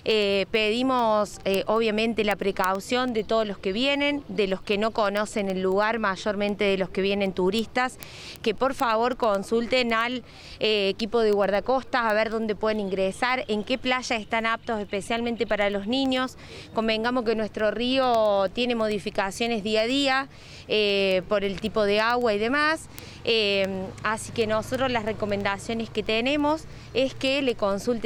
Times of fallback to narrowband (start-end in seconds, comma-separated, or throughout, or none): none